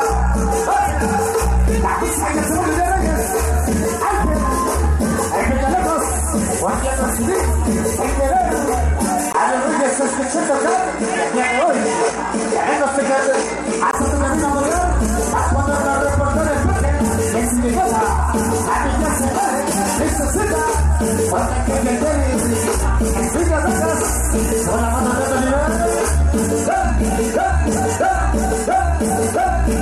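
At 9.32 s there's a 20 ms gap, then the sound goes duller, with nothing above 10.1 kHz and a faint new hiss well under the signal, though the level barely moves. It's likely an input switched to a poorer device, and it returns to full range at 13.93 s.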